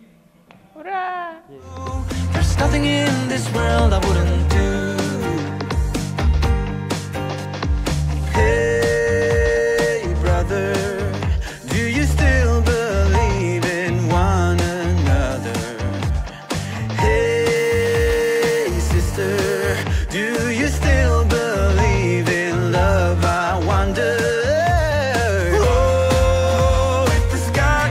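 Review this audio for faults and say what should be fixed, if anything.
GSM phone buzz from 17.56 to 19.83 s: a nearby 2G phone on a call pulses at 217 Hz, and the rectified bursts leave a steady buzz about 18 dB below the signal. Its 217 Hz fundamental and dense harmonics set it apart from 50 or 60 Hz mains hum. Keep mobile phones away from the recording chain, or switch them to airplane mode during sessions.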